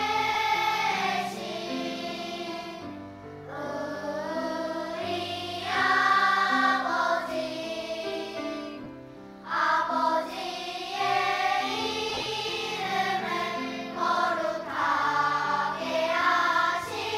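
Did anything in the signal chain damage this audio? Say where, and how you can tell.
Yes. Lost LE Audio frames on the Bluetooth link: brief smeared dropouts at 0.34 s, 8.84 to 8.86 s, and scattered gaps from 12.09 to 12.26 s. The decoder refills each gap with noisy spectral copies, fitting 7.5 ms frames, with runs up to about 30 ms.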